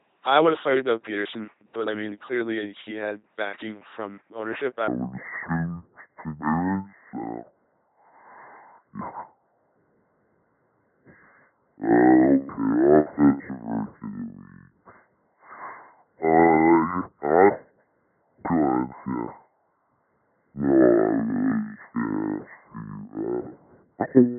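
Throughout, the speech has passed through an LPC-10 vocoder at 2.4 kbit/s, which rebuilds each frame from a ten-pole vocal tract filter driven by either a pulse train or noise. The heavy damage leaves a buzzing, mechanical robot voice.

From 4.88 s, right after "had backing from ownership", to the end, a section at the wrong speed plays at 0.56 times the original rate, likely from being fitted to the wrong clock. Speech turns slow and deep, dropping roughly ten semitones.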